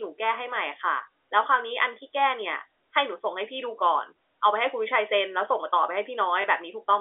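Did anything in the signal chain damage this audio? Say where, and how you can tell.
Yes. Packet loss with last packet repeated, at the network stage, from 6.42 to 6.44 s near the end of the speech. A 20 ms stretch is replaced by a copy of the audio just before it, which fits a single lost 20 ms packet. The single repeat sounds like a small blip. The G.711 telephone coding audibly limits the band to roughly 300 Hz to 3.6 kHz.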